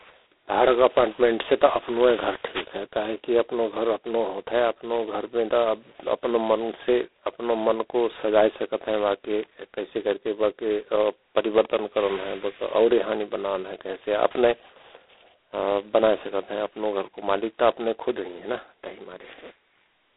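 From start to finish the speech carries G.726 ADPCM damage of a heavy kind. The coder sends only a couple of bits per sample describing how far each sample strays from a running prediction, so the error rides up and down with the speech as a harsh, rasping hiss. That coarseness fits the 16 kbit/s mode. A spectrogram shows a telephone band of roughly 300 Hz to 3.6 kHz, empty above 3.8 kHz, with grainy noise filling the gaps between harmonics wherever speech is loud.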